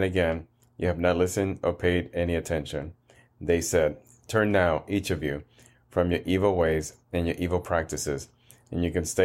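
No technical faults can be heard anywhere in the recording.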